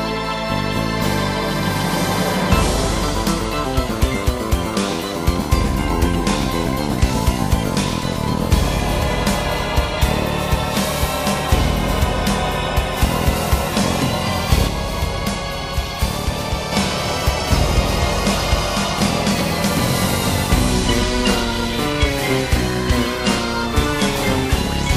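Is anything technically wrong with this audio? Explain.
Yes. From 14.68 to 16.72 s there is a sudden gain jump: sound and background noise drop together by about 4 dB, likely from a gain step applied without a ramp.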